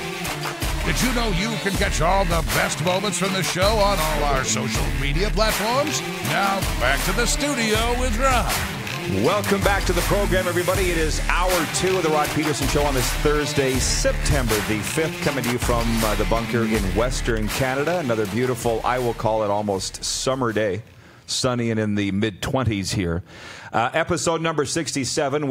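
No technical faults are audible.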